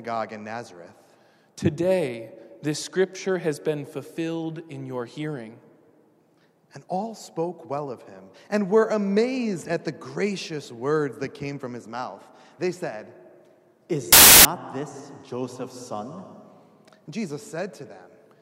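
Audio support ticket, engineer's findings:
Burst of loud broadband noise, 14.13 to 14.45 s. Samples built from the wrong bytes: decoder's misaligned or byte-swapped, so the noisy low bits land on top. Check the reader.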